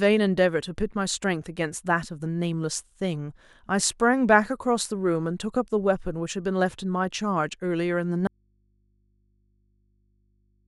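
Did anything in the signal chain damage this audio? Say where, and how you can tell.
Yes. An audio dropout to a faint residue begins abruptly at 8.27 s and lasts to the end. The speech cuts out mid-flow, leaving only mains hum roughly 40 dB below it. The likely cause is a broken analogue connection that left the input open to hum.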